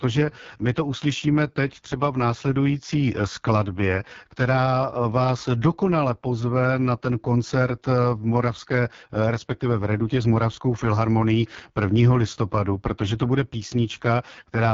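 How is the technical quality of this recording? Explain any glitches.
Rough, raspy speech with a dull top end runs through all of it, the sound of the AMR wideband (HD Voice) codec at its lowest rate, around 6.6 kbit/s. Nothing above about 7.1 kHz survives, and at that rate the pulse-driven vocal tract model can't capture the voice's fine detail. The heavy coding damage leaves a grainy, buzzy texture, with only shaped noise filling the top band.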